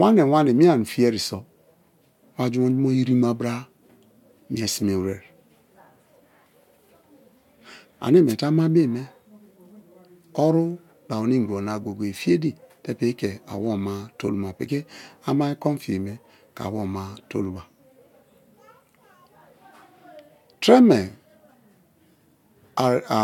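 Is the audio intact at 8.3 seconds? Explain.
No. From 8.27 to 8.35 s there is a wireless microphone noise hit. The FM radio link from the microphone fades for a moment as reflected copies of the signal cancel each other at the receiver, so the receiver's own noise rises and breaks through. For about 80 ms a short swish of static is heard.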